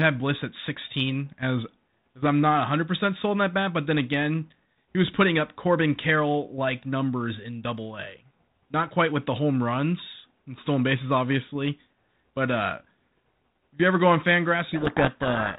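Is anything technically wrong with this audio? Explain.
Yes. From 14.66 s to the end of the clip at 15.6 s there is a codec payload misread. The speech runs through G.726 ADPCM, band-limited at 4 kHz with the light coding hiss of a 32 kbit/s DECT-style link. Here the decoder reads the bits of each G.726 code word in the wrong order, so every difference value is wrong and the adaptive predictor drifts. The speech becomes buried in harsh, rasping distortion. On a spectrogram, dense broadband noise fills everything below 4 kHz and smears the harmonics. On the waveform, a thick jagged band replaces the clean speech envelope.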